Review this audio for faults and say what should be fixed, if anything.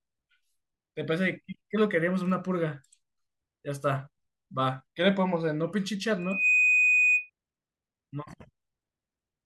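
Loudspeaker feedback squeal runs from 6.18 to 7.3 s: a single 2.5 kHz tone swells over roughly a third of a second and then sits a few decibels above the speech. The microphone is picking up the loudspeaker it drives, and at 2.5 kHz the round-trip gain through that loop exceeds one, so the tone reinforces itself each pass until the loop is broken. To prevent it, lower the monitor gain or move the microphone out of the loudspeaker's coverage, and notch 2.5 kHz if the howl persists.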